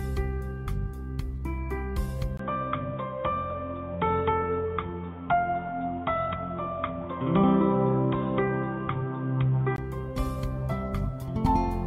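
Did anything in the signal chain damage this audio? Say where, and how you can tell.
Yes, at the input stage: from 2.37 to 9.78 s, after a 20 ms gap, nothing above 3.8 kHz and a new faint hiss. A codec cut wouldn't add noise. Likely an input switched to a poorer device.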